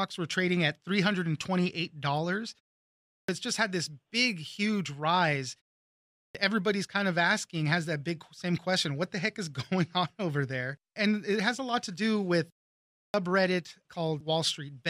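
Clipped start after a pause occurs three times, at 2.92 to 3.29 s, 5.97 to 6.35 s and 12.79 to 13.14 s. Each follows a short silence of 0.4 s, 0.44 s and 0.33 s. The output device sleeps during the gap and needs time to wake, so roughly 350 to 380 ms of the resuming speech is swallowed. The next words then begin abruptly, without their opening sounds.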